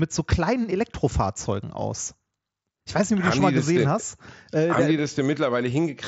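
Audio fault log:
3.24 s concealed Bluetooth headset packet loss: a 7.5 ms gap, consistent with one lost frame, patched with the preceding waveform, leaving an almost invisible seam on waveform and spectrogram.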